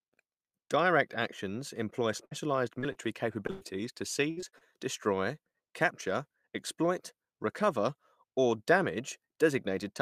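Just after "actions employ", at 2.17 s, about 20 ms of the stream failed to reach the decoder in time. This is a short concealed packet loss: the receiver extended the preceding sound across the hole and blended back into the real audio, leaving a brief smear or wobble.

At 2.25 to 2.33 s a burst of packet loss follows, with about 60 ms missing. The decoder carried the last sound forward and faded it, so a held buzz or fading hiss stands in for the lost stretch, and the audio resumes further on with that portion gone.

Further short concealed packet losses occur at 2.79 to 2.84 s, with about 40 ms missing, then at 2.92 to 2.97 s and at 3.47 to 3.50 s, each with about 20 ms missing. Each gap is bridged by the same continuation of the previous sound and heard as a small wobble. A brief consonant can disappear inside one.

At 3.50 to 3.63 s a second burst of packet loss removes about 100 ms. 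The patch stretches and fades the last sound over the whole gap with no silence, and the speech picks up later with that part absent.

From 4.31 to 4.63 s, right before "destroy capture exploit recover", repeated packet loss produces a robotic sound. Four gaps arrive in quick succession, the longest about 62 ms, and about 140 ms in all is missing. Concealment fills roughly 44% of the span, so the speech comes through choppy with pieces missing.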